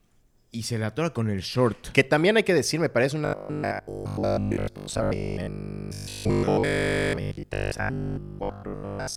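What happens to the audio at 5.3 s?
At 5.3 s the speech is in the middle of robotic sound from repeated short buffers, running from 3.25 to 9.15 s. The sound is a rigid, metallic 50 Hz buzz that loosely tracks the speech. It is likely caused by audio arriving too seldom, so the software loops a 20 ms fragment for most of that span while the real audio is dropped.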